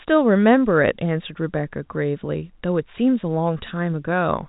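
Nothing in this telephone-band speech stood out on listening.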